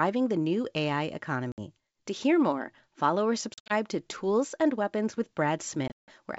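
Wideband speech with packet loss on an ADPCM call. Hard silent gaps occur at 1.52–1.60 s, 3.54–3.73 s after "hear more follow or", and 5.88–6.12 s. Each return is briefly distorted while the decoder's predictor resyncs.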